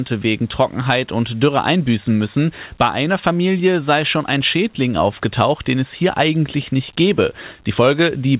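No technical faults can be heard in this speech recording. It has come through a call path whose band stops at about 4 kHz, which fits a G.711 A-law codec at 64 kbps, and that narrow band is simply how the call sounds.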